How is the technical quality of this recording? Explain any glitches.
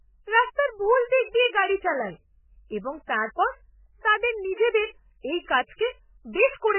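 Poor: throughout the speech, everything above 3 kHz is missing, and what remains sounds watery and swirly with smeared attacks and heavy damage. That points to MP3 compression, likely at a very low bitrate around 8 kbps, where the encoder cuts the treble and drops weak frequency lines frame to frame.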